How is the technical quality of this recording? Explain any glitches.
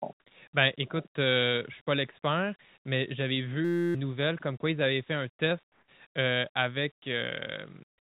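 The recording has two glitches, both heard through a narrowband call path that leaves nothing above 4 kHz.

From 3.65 to 3.95 s there is a system hang loop. A 5.8 ms slice, which fits a 256-sample buffer, repeats as a 172 Hz buzz. The spectrogram shows a rigid harmonic comb, and the waveform repeats identically. About 300 ms of audio is lost.

From 5.72 to 5.88 s, comfort noise replaces the background. The real room sound gives way to steady, featureless hiss about 5 dB quieter, likely from discontinuous transmission. It appears as a flat, textureless band.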